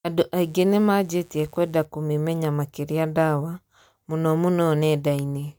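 From 0.36 s to 1.86 s a mains buzz sits under the speech, a steady, raspy tone built on 60 Hz. Sharp switching spikes, entering twice per mains cycle through a dimmer, rectifier or unshielded line, put a dense ladder of 60 Hz harmonics into the signal, extending up to several kHz. Its level is low, around 35 dB below the speech. A spectrogram shows evenly spaced horizontal lines starting and stopping at those times, and the waveform carries small periodic spikes every 8.3 ms.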